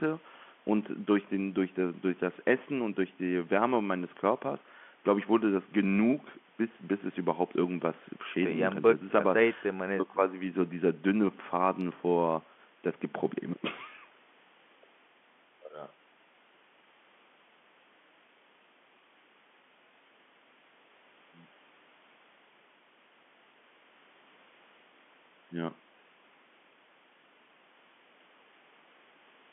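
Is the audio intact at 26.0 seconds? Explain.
Yes, at 26.0 seconds the speech runs on without any dropout, glitch or other fault, carried through the telephone-band G.711 coding.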